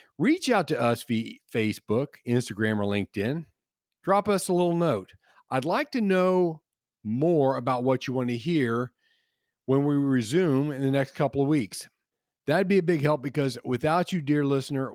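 No audible technical faults.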